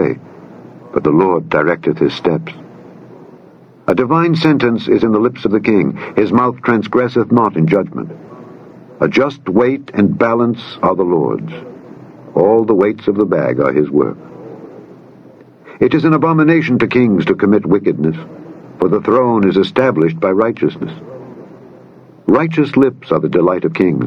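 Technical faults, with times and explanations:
Throughout, gain pumping: the level is pulled down each time a loud sound arrives. The swing is around 20 dB, and loud and quiet passages sit unnaturally close in level, giving a squashed, flattened feel. The likely cause is input gain set far too high, with a fast limiter or compressor clamping down on each peak and releasing in the pauses.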